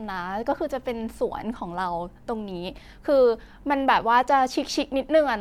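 Nothing technical stands out here; the speech comes across without any audible glitches, dropouts or other problems to point to.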